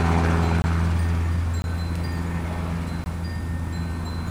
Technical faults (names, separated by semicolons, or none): block of digital silence